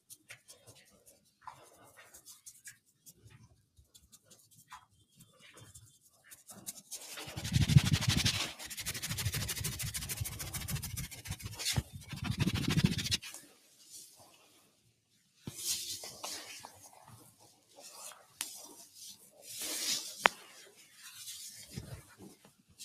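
A noise suppressor built for speech has been left running on this sound for the whole clip, and it's treating anything steady or ringing as noise. The gain it applies swings by something like 15 dB, so sustained parts and decaying tails keep getting pulled down while sharp onsets punch through. You hear it as pumping and a sort of fluttery thinning, with the level breathing in and out against the natural envelope of the sound.

The worst of it shows up as sound cut by the noise suppressor in seven stretches: 0.00 to 1.42 s, 2.76 to 5.35 s, 5.97 to 6.25 s, 13.41 to 15.46 s, 16.75 to 19.38 s, 20.48 to 21.05 s, and 22.01 to 22.80 s. In each, held or fading material gets clamped hard, about 11 dB down at the deepest in most, about 12 dB around 13.41 to 15.46 s, about 9 dB near 20.48 s and only about 7 dB at 5.97 s. The stretch from 13.41 to 15.46 s has roughly two seconds actually ducked. The others run from a few hundred milliseconds up to about a second and a half.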